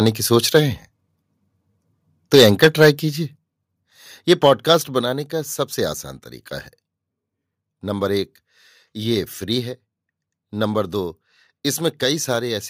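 Microphone overload first appears at 0.06–0.09 s and 0.55–0.58 s, then more heavily from 2.33 to 2.89 s and again at 4.30–4.73 s. The speech peaks are flattened with a harsh, crackling edge. The likely cause is input volume set so high that the peaks ran into the converter's limit, overshooting by about 4, 2, 8 and 2 dB. A small share of samples, at most a few percent, is squared off.

Microphone volume stepped down occurs at 2.36, 3.36, 5.01 and 12.36 s. The level of both the speech and the background falls abruptly, by about 2, 6, 4 and 1 dB. The first step lands inside the worst distorted stretch. These sudden drops likely come from the call software detecting the overload and lowering the device's input volume one step at a time.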